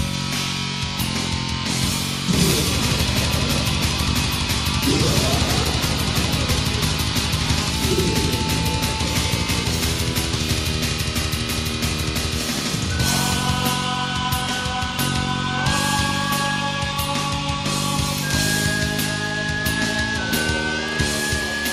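Nothing stood out on listening; no technical problem could be heard anywhere in the audio.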